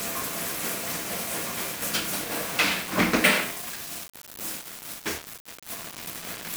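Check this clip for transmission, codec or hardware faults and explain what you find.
One fault runs through the whole clip. Low bit depth without dither, throughout: grainy distortion follows the sound, with error only about 10 dB down, likely from undithered rounding to 5 bits.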